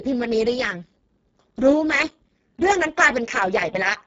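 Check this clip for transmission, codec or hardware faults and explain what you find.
One codec fault is present. Speex codec damage runs throughout, with the sound pointing to a very low setting of around 6 kbps. Too few bits for the excitation leave the speech hoarse, noisy and close to robotic. Above 4 kHz there is only shaped noise-like fill, and nothing above 7.7 kHz.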